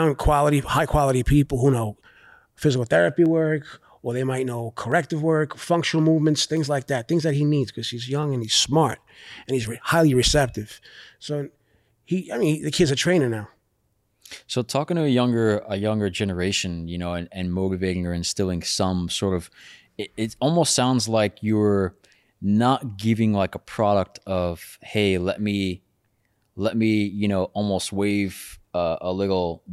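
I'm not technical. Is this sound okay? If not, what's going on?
No. Through the speech, from about 1.6 s to 28.1 s, there is a click roughly every 1.66 s, about fifteen in all. These are clock drift buffer slips. Two pieces of equipment were likely keeping time separately at very slightly different speeds. Each time the gap builds up, a handful of samples is dropped or repeated. Random glitches land at uneven moments, but these keep a steady beat, like a metronome.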